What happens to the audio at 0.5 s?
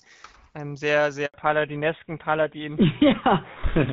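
At 0.5 s the speech carries on intact, with nothing breaking into it beyond the light codec damage expected of AMR-WB at 12.65 kbit/s.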